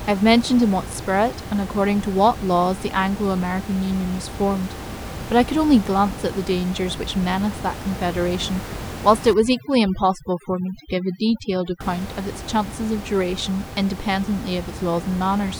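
From 9.34 to 11.81 s, overdone noise removal takes hold. The room noise, sitting about 12 dB below the speech, trips a noise reduction stage set far too hard, so individual frequency bands near the noise level are pulled down or gated out, along with the quieter edges of the speech. The background drops and breaks up into twinkling specks. A spectrogram shows isolated bright dots in a dark floor, with ragged holes bitten out of the harmonics.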